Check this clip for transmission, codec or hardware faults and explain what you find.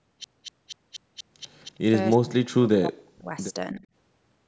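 There's one real problem here: speech suppressed in double talk. From 2.17 to 3.34 s the speech sinks almost to silence, and from 3.74 to 3.84 s it dips by roughly 15 dB. Likely the echo canceller heard the far end at the same moment and clamped down on both sides. The call microphone processing is doing its usual job, with nothing above 8 kHz.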